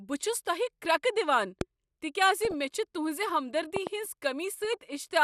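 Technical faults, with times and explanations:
Throughout, MP2 compression: The speech sounds dull and muffled, with a gurgling, granular roughness and upper detail that seems to flicker in and out. The likely cause is MPEG Layer II coding at a low rate, which fits something around 80 kbps. The encoder divides the spectrum into 32 sub-bands, shuts off upper bands it cannot afford, and quantises the remaining ones coarsely.
1.61–1.63 s and 3.76–3.89 s, loud pop: The first is a single sharp pop. The second is a pair of pops in quick succession. Each stands about 15 dB above the speech, which continues underneath. A sudden electrical step or pulse is the likely cause, such as a plug, a switch, static or a driver glitch. Each pulse is added straight onto the signal, and the following circuitry gives it a brief thump-like shape.
2.37–2.54 s and 4.62–4.73 s, DAB burbling: Short patches of watery blips and burbling sit over the speech, each lasting about a tenth of a second or a little more. 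This comes from weak DAB reception. Bit errors, a small fraction of a percent, slip past error correction into the MP2 data. Corrupted samples put short blips of noise into single sub-bands, and corrupted scale factors make sub-bands jump in level for up to a frame, which suits the eight and seven frames hit.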